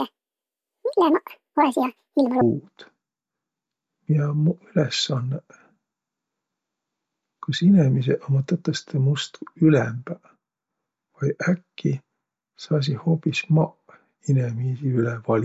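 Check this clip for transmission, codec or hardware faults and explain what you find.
One fault appears, in the opening stretch of speech.

From 0 to 2.41 s, the speech sounds chipmunk-like and rushed, running at double speed and a full octave (12 semitones) high. This is a wrong sample rate: the samples are read out twice as fast as they were captured, with no conversion, which fits 16 kHz audio played back at 32 kHz.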